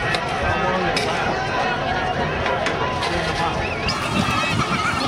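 From 3.89 s to the end of the clip, a section at the wrong speed was likely caused by an editor or player running this stretch against a mismatched clock, playing it back 1.66 times faster than it was captured. Because speed and pitch are tied together in this kind of error, the sound jumps abruptly at that point into a hurried, raised register, lifted by roughly ten semitones, and stays that way until the audio ends.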